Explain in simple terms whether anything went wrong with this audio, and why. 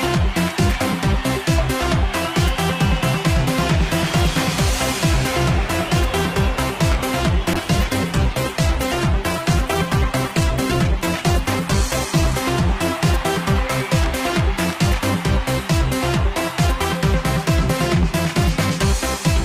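From about 7.5 s to 12.4 s, the sound turns rough and muffled, losing its crisp top end and taking on a watery quality, then clears up again. This is a call bitrate drop. The call's connection estimate fell, so the sending software had to squeeze the audio into far less data. It coded the sound more coarsely and trimmed away the high frequencies, and the detail returned once the data rate recovered about five seconds later.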